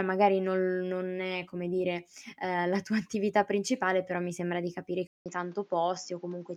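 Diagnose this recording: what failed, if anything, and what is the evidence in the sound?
At 5.07 s the speech cuts out for about 0.19 s, then returns duller, about 5 dB quieter, with nothing above 7.4 kHz and a new noise floor roughly 35 dB down. That is likely an input switched to a poorer device at the driver stage, unlike a codec bandwidth drop, which would not bring its own noise and level.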